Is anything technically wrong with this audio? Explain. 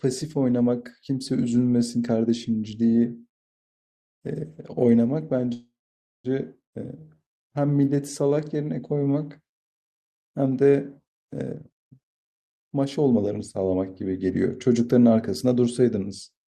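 Yes, the speech has three playout faults.

From 5.53 to 6.26 s there is a call audio freeze: a brief fading buzz or hiss, then about 0.54 s of silence. Delayed packets likely emptied the jitter buffer, so 710 ms was inserted and nothing was lost.

From 7.00 to 9.59 s there is a jitter buffer slow-down. Repeated pitch periods add 271 ms, so speech plays at 90% speed with unchanged pitch and drawn-out sounds.

From 11.45 to 13.75 s there is a jitter buffer speed-up. Short pitch-period cuts remove roughly 0.7 s, so speech plays at 130% speed with unchanged pitch and sounds hurried.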